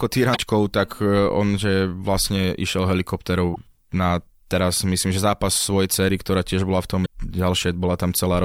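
Short glitches break into the speech at 0.33 to 0.38 s, 3.52 to 3.57 s and 7.02 to 7.06 s, each lasting only about 40 to 50 ms. All three come from damaged data in the compressed stream: a small run of bytes is corrupt, so the decoder misreads those frames, loses its place, and gives a brief chirp, click or short hole while it hunts for the next valid frame header.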